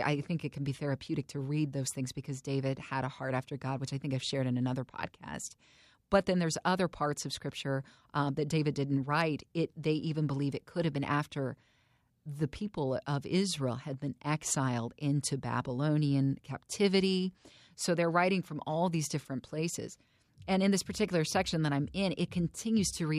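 Nothing in this recording stands out as a technical fault; the speech runs along without any glitch, dropout or interruption catching the ear at any point.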